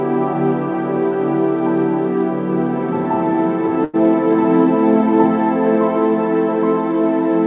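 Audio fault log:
3.84–3.96 s, burst of packet loss: consecutive packets went missing, so the receiver held and faded the last sound for 90 ms, then skipped 90 ms ahead.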